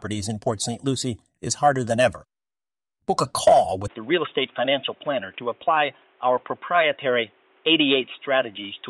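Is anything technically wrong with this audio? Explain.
Yes. From 3.88 s, right after "a call", to the end, the speech abruptly turns dull and boxy with nothing above 3.8 kHz, at an unchanged level and with new faint background noise around 35 dB below it. The likely cause is an input switched to a poorer device.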